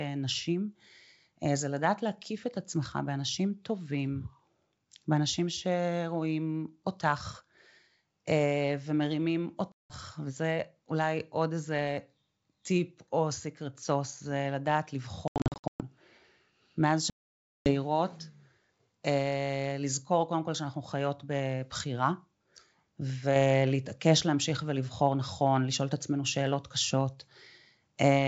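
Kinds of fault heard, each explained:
Packet loss on an ADPCM call, at 9.72 to 9.94 s, 15.28 to 15.83 s and 17.10 to 17.72 s: whole stretches of the coded stream go missing and are filled with hard-edged silence. The first gap drops about 180 ms. The second scatters about 380 ms of loss across 520 ms, with no run longer than 120 ms. The third removes about 560 ms. Because the decoder's adaptive predictor and step size drift from the sender's during each gap, the wideband G.722 speech comes back briefly slightly distorted before resettling.
Sudden gain jump, from 23.36 s to the end: the level steps up by about 4 dB between one sample and the next and stays there. Speech and background noise rise together, which shows the change is applied to the whole signal rather than coming from the talker. The likely cause is a digital gain setting switched without any ramp, so the new level takes effect instantly instead of fading in.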